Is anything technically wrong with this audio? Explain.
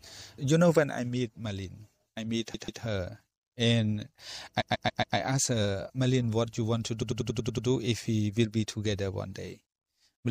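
Yes. Repeated frames: a short run of compressed frames was passed to the decoder more than once, so the same slice plays again and the sound stutters. A 0.14 s block repeats twice at 2.53 s after "I meet" and four times at 4.60 s before "asked her". A 0.09 s block repeats seven times at 7.01 s after "what you want to". Together these add about 1.5 s.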